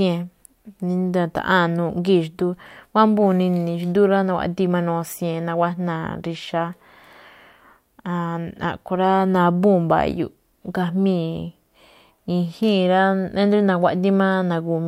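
Speech recording with no technical faults detected.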